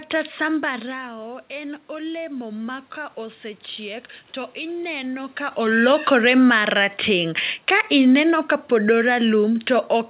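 Between 0.81 s and 5.67 s the automatic gain control, meeting an input about 13 dB quieter after the talker moved away, raised its gain gradually by about 6 dB. The voice and the room noise swell together in this automatic gain rising.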